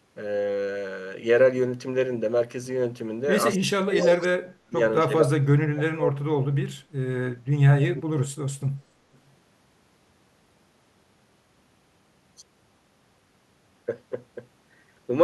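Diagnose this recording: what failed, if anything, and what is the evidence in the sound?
Speech suppressed in double talk, 3.56 to 4.8 s and again 5.05 to 6.77 s, a call-processing failure. In each stretch the talker's level sinks in pieces, bottoming out at about 35 dB down in the first and about 30 dB in the second, with roughly a second and a half affected each time. This is likely the echo canceller meeting simultaneous talk from both ends, failing to tell near speech from loudspeaker echo, and attenuating everything.

Echo leak, at 3.99 to 4.18 s, 7.95 to 8.03 s and 9.13 to 9.31 s, also in call processing. Short scraps of a delayed copy of the voice trail the original by 252 ms. They sit about 20 dB below the speech in the first burst, about 10 dB below in the second, where it is most obvious, and around 40 dB below in the third. The likely cause is a far-end loudspeaker whose echo canceller let residual microphone pickup through and sent it back.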